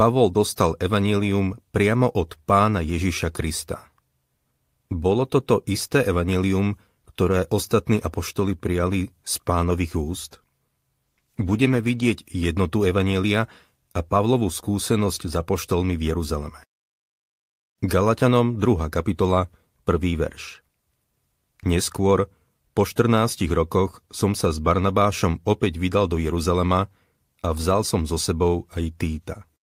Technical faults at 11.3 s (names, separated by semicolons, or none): call bitrate drop